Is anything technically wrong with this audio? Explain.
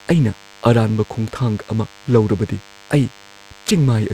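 Yes. A DECT cordless phone buzz runs through the whole speech recording. A nearby DECT handset or base station transmits a brief radio burst every 10 ms, and the audio circuitry rectifies that energy into the signal, producing a thin, steady buzz at 100 Hz, sitting roughly 30 dB below the speech. On a spectrogram it shows as evenly spaced horizontal lines at 100 Hz and its many harmonics. The waveform carries a small, regular pulse train repeating every 10 ms.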